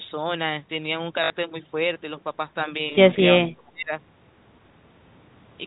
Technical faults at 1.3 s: packet loss with last packet repeated

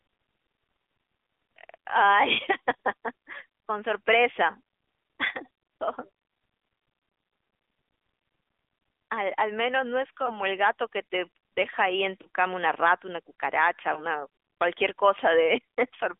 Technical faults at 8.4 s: AMR narrowband mobile codec

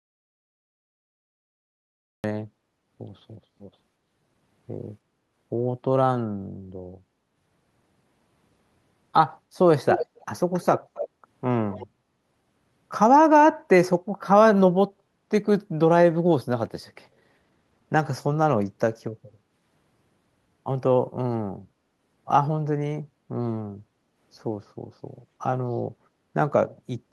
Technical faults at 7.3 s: none

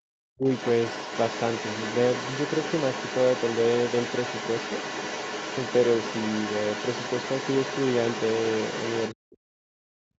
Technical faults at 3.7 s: other side's voice leaking through

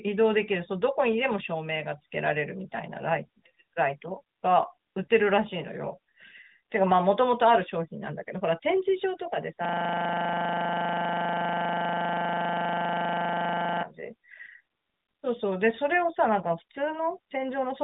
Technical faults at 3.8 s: none

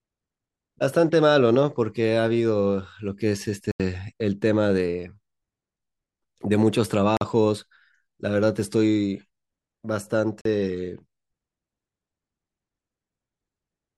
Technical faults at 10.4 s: block of digital silence

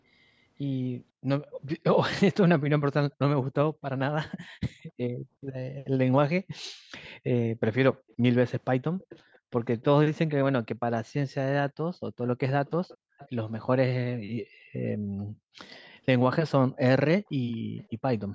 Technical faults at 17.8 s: background gated by the echo canceller; echo leak

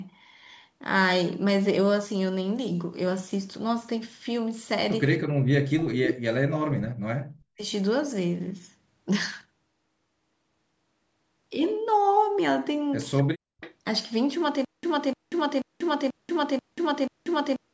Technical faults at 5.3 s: background gated by the echo canceller

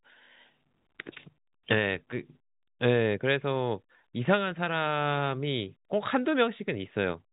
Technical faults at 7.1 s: none

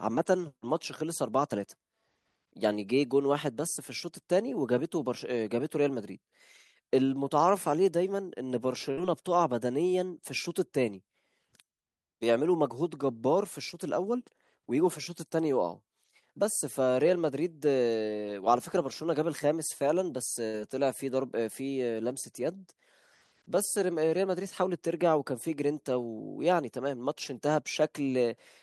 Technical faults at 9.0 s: burst of packet loss

